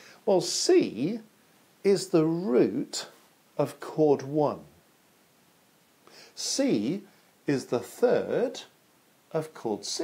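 Nothing is technically wrong with this audio clip; no faults can be heard anywhere in it.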